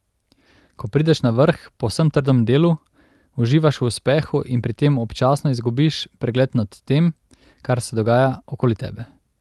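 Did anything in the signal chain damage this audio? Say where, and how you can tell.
No, nothing in the signal chain damaged this speech. It has passed through a call path whose codec limits the top end to about 12 kHz, which fits Opus at roughly 32 kbps.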